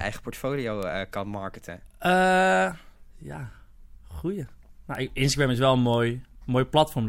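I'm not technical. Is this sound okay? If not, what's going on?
No. The speech has three short, sharp ticks, at about 0.83, 4.95 and 5.94 seconds. Each is a single click that has nothing to do with the voice, and the last one is a little quieter than the other two. This is a bit error spike: a single digit in the stored or transmitted audio got flipped, so for a tiny instant one or two sample values jump far off and then snap straight back.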